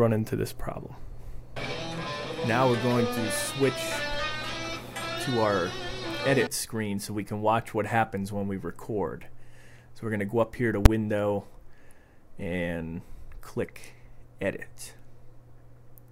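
At 10.86 s there's a single sharp bang, and it's invalid numbers at full scale. Some calculation blew up into infinite or invalid values, which got pinned to the maximum level for about 6 ms, which fits a 256-sample block. That's too brief to hear separate edges, so it lands as one loud crack.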